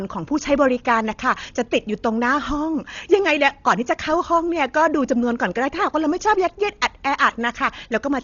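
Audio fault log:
Throughout, Dolby Digital compression: dull speech, nothing above 6.9 kHz, rough fluttering noise around tones; likely heavy low-bitrate coding filling starved lines with noise, fitting 32 kbps.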